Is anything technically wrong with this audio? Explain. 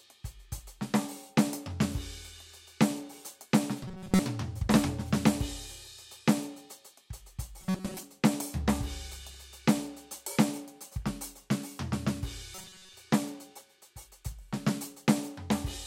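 Yes, there's robotic sound from repeated short buffers at 3.83 to 4.20 s, 7.61 to 8.03 s and 12.55 to 12.93 s. The music collapses into a stiff metallic buzz at 188 Hz, likely because new audio arrived too seldom and a roughly 5.3 ms slice was looped for most of each stretch.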